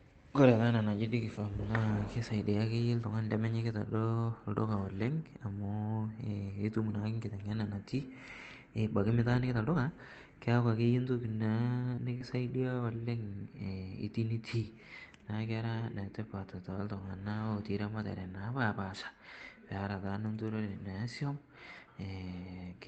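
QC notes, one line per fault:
11.61 s, 12.20 s and 12.80 s: lost packet rebuilt from error correction. Each time a single 20 ms stretch was lost but recovered from the low-bitrate copy carried in the next packet, so there is no hole, only a brief patch that sounds rougher and grainier than the surrounding Opus audio. It differs from concealment because the real sound is still there, only coarser. It is not a smear or a guess at the continuation.
11.95 to 11.99 s and 12.18 to 12.22 s: short concealed packet loss. About 20 ms failed to arrive in time at each point, and the receiver extrapolated the last sound to fill it: 20 ms of fill at the first, 17 ms at the second, where a few milliseconds of timing shift were also introduced. These are heard as a short smear or wobble and then a blend back into the real audio. Unlike the rebuilt packets, what fills the gap is invented, not coarse real audio. 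At 12.20 s the two overlap, so the concealed stretch runs straight into a rebuilt frame.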